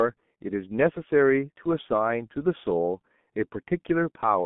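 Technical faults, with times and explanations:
Throughout, G.723.1 codec: heavy low-bitrate damage leaves speech muffled and hoarse within a 150 Hz to 3.5 kHz band, spectrogram empty above, smeared consonants, coarse 30 ms blocks.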